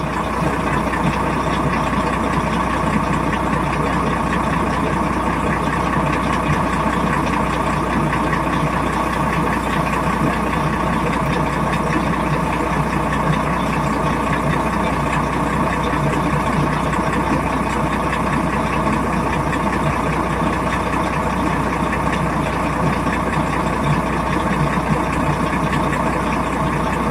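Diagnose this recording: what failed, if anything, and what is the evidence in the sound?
Nothing in the chain has failed: the audio shows no audible evidence pointing to any stage from capture to playback.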